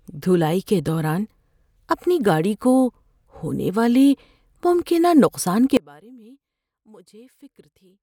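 Speech, where at 5.77 s the feed was likely lost while the path stayed live, an audio dropout to a faint residue: sound cuts abruptly to a faint residue roughly 30 dB down until the end.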